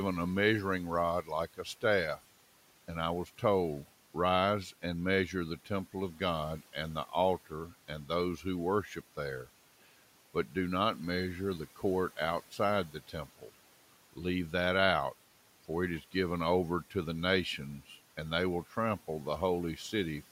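From 12.91 to 13.49 s, parts of the speech turn faint and swallowed, dipping by up to about 12 dB: speech cut by the noise suppressor, which mistook them for the low room noise.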